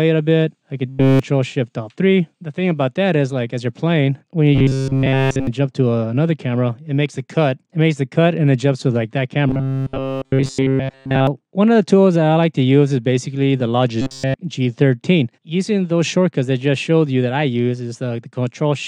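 A rigid, metallic buzz at 134 Hz is heard at 0.89–1.19 s, 4.55–5.47 s, 9.48–11.27 s and 14.01–14.36 s. This is robotic sound from repeated short buffers, likely a 7.5 ms buffer replayed throughout.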